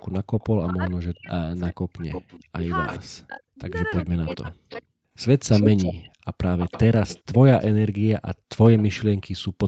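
From 0.0 to 2.99 s, a faint repeat of the speech trails about 410 ms behind, roughly 15 dB down. This is likely an echo leak, where a loudspeaker echo slipped past the canceller.

From 0.25 to 0.3 s, the room sound dips about 14 dB for about 50 ms. The echo canceller gated the background, then released it.

From 0.59 to 4.94 s, the speech drops away in pieces, sometimes nearly to silence, for around 3 s in total. This is likely speech suppressed in double talk, as the canceller turned down both sides.

From 3.93 to 7.65 s, a stronger delayed copy returns, about 329 ms late and about 10 dB below the speech. This is likely another echo leak.

From 8.35 to 9.56 s, the background is gated hard, falling about 40 dB for around 300 ms in total.

Within that stretch, from 8.77 to 8.83 s, a brief, faint echo is heard about 452 ms late and about 25 dB down. This is likely a short echo leak.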